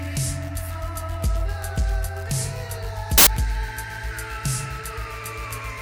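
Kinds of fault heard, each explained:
Samples built from the wrong bytes: for about 90 ms, from 3.18 to 3.27 s, the sound gives way to a burst of loud, harsh broadband noise, because each sample's bytes were put together in the wrong order or offset, so the rapidly changing low bits became the dominant part of every value. Unlike clipping or digital distortion, which still follow the original's shape, this burst is noise-like and unrelated to it.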